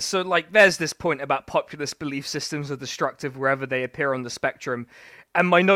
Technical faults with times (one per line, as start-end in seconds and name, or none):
none